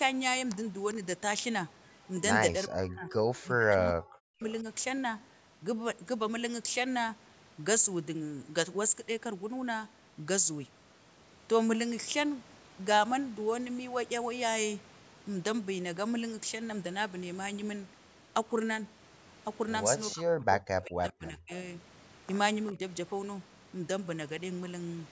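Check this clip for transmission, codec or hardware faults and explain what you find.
Two call-path faults appear in the speech, both from the echo canceller of a loudspeaker call.

Speech suppressed in double talk: at 2.68 to 3.12 s, 3.43 to 4.43 s and 20.15 to 21.52 s the talker sinks sharply, by roughly 40 dB at worst, nearly vanishing. At 22.72 to 22.82 s a milder dip of about 10 dB follows. The likely cause is the canceller muting the talker while the far side spoke too.

Echo leak: from 22.67 to 22.72 s a brief, faint scrap of delayed speech surfaces, about 25 dB below the voice and lagging about 0.4 s behind it. This is likely loudspeaker sound the far-end canceller failed to remove, returned down the line.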